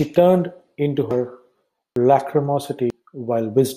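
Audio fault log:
1.11 s, 1.96 s, 2.90 s: dropped buffer (overrun), likely. Each is a jump where the speech skips ahead with no silent gap. About a tenth of a second is lost at each of the first two, the first right after "turned into", and a little more at 2.90 s. The missing gap is what separates this from a dropout.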